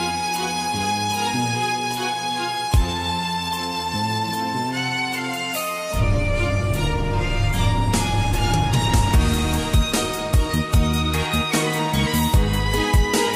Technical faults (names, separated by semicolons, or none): none